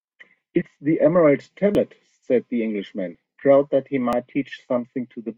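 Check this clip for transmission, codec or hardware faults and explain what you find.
Four small jumps in the speech, at 0.62, 1.75, 3.15 and 4.13 s, most likely a dropped buffer (overrun): unread samples were overwritten, so speech skips ahead without silence, roughly 30 ms at the first two and 10 ms at the last two.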